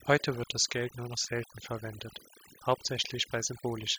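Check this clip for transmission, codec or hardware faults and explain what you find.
One fault runs through the whole clip: overdone noise removal. It is present from start to end. A noise reduction stage was set too aggressively. It pushes individual frequency bands down or out whenever they sit close to its noise estimate. Quiet parts of the speech fall below that line and get cut too. The background drops and breaks up into twinkling, warbling specks.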